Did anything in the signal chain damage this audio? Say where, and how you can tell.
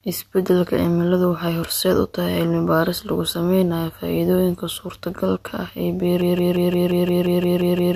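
Yes. From 6.21 s to the end of the speech clip, the sound locks into a broken-record loop: a fragment of about 175 ms repeats exactly, back to back, roughly ten times with no progress. Whatever should have followed is simply gone. The tight, identical repeats point to the playback or streaming stage, likely a stall in which the player or encoder kept re-sending the last buffered fragment it held instead of fresh audio.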